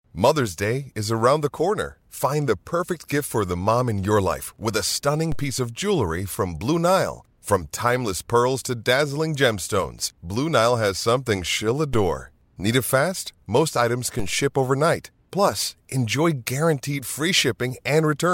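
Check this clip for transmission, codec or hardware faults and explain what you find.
A DC step occurs at 5.32 s (between "your life with a" and "piece of jewelry from"), 11.94 s (after "has something she'll") and 14.19 s (before "ship overnight"). The waveform's zero line abruptly jumps by about -19 to -20 dBFS, then drains away through a roughly 2 Hz high-pass. Each jump is a low thump under unchanged speech.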